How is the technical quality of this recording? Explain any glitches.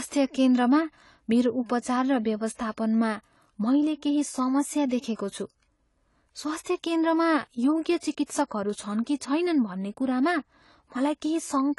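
The recording suffers from clearly audible lossy coding damage throughout, most likely AAC compression. Nothing survives above about 11.4 kHz, so sibilants lose their top and the speech sounds dull. Below that ceiling, the encoder spends too few bits on each frame of frequency lines, leaving gaps or noise-filled bands that give consonants and held vowels a fizzy, warbling shimmer. That watery texture sets it apart from a simple low-pass filter, which would dull the sound cleanly. The depth of the damage fits a bitrate around 32 kbps.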